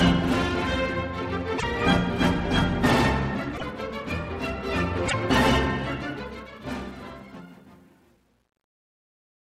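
Three short disruptions at 1.57–1.64 s, 3.57–3.63 s and 5.08–5.14 s sound like a broken MP3 bit reservoir. The audio jumps forward, and each 64 ms gap comes out as a brief chirp or noise burst rather than clean sound. On a spectrogram each shows as a thin vertical smear of broadband energy, about three frames wide at a spacing that fits 24 ms MP3 frames. The likely cause is cut frames, after which the following frames read their borrowed reservoir bytes from the wrong data. The fade-out from about 6 s to the end at 9.6 s carries truncation distortion on a fade from 6.10 s. The level is being reduced without dither at a depth that points to roughly 10 bits. From 7.07 s onward the tail turns gritty. On the waveform the decaying signal collapses into coarse square steps. On a spectrogram the quiet tail shows a haze of harmonic grit where a smooth decay should be.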